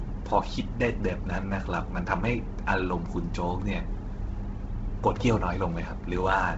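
Speech throughout carries heavy Bluetooth LC3 compression, likely from an LE Audio link. Nothing survives above 7.8 kHz, and the upper band sounds breathy and grainy from noise fill rather than simply dull, as a plain low-pass would, which fits roughly 16 kbps with 10 ms frames.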